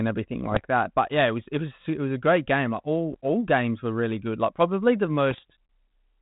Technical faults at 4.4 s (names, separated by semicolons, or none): none